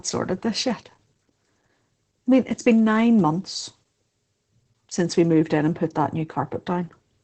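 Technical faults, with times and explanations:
throughout: Opus voice compression, with muffled, hoarse, robotic speech and nothing above 8.4 kHz. SILK wideband coding, consistent with about 12 kbps, quantises the excitation coarsely.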